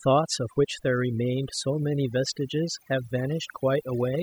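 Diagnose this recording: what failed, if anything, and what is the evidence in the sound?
Overdone noise removal at the call-processing stage runs through the whole speech clip: pauses drop to near silence dotted with twinkling specks. The suppressor is cutting individual bands near its noise estimate, taking quiet speech detail too. Unlike codec artefacts, the damage concentrates where the signal nears the noise floor.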